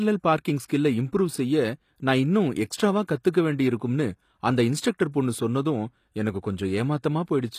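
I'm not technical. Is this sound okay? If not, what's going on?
No. The speech sounds plainly gritty and lispy in the hiss of s sounds, and the very top of the treble stops at about 15 kHz. That is likely HE-AAC compression, which stores only the lower sounds and rebuilds the treble by copying them upward.

There are also two brief pre-echo spots, at 0.68 s and at 3.33 s (between "செய்ய நான் இன்னும் எக்ஸ்ட்ராவா" and "வேண்டியிருக்கும்னு அந்த"). A short hiss arrives a split second before a sharp sound and blurs its start, because the compression spreads its noise slightly ahead of the sound.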